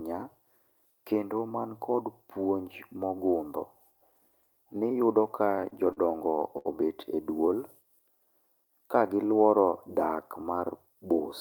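From 5.45 to 5.99 s, packets arrived late repeatedly, emptying the jitter buffer four times: repeated stalls (stutter), with about 73 ms of held sound, the longest 38 ms, making the speech drag. At 6.58 to 6.67 s, a short stall from a late packet left the buffer empty, so the last sound is held about 70 ms, with a slight buzz or dip, before resuming. At 9.49 to 9.73 s, just after "ka gi", a jitter buffer speed-up trimmed about 40 ms of pitch periods, running the speech at 114% speed with unchanged pitch and a hurried feel.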